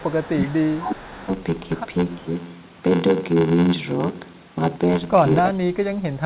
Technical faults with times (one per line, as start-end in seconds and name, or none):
0.00-6.25 block size mismatch (padded)
0.00-0.25 echo leak
0.24-1.29 speech suppressed in double talk
2.19-2.35 speech suppressed in double talk
5.49-6.25 speech suppressed in double talk